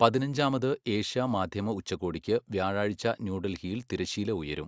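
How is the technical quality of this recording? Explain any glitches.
No faults or glitches detected.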